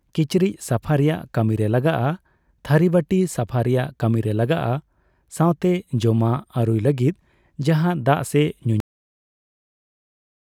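At 8.80 s the final stretch of audio was never written out or played back, producing a cut-off end. The last buffers of the speech simply went missing, so nothing after that point reached the output. The sound stops abruptly in the middle of an utterance, with no fade or natural decay, and falls straight to digital silence. That dead silence then holds for the remaining 1.8 s until the clip ends.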